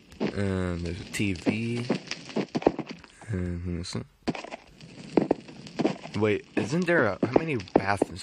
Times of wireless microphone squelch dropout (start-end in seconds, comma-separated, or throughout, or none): none